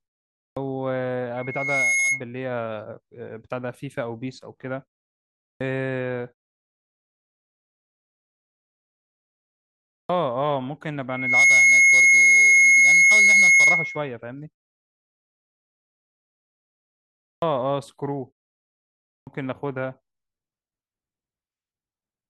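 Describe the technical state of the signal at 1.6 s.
A microphone is picking up the loudspeaker it feeds, and the loop gain has passed unity at 2.2 kHz, producing loudspeaker feedback squeal from 1.36 to 2.23 s. The tone swells over roughly half a second into a piercing whistle about 5 dB above the speech.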